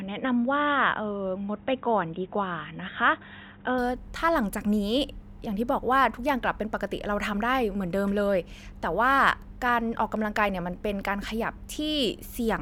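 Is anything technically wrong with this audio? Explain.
Yes. Until 3.78 s the speech sounds dull and boxy with nothing above 3.8 kHz, likely because the input switched to a poorer device before clearing up.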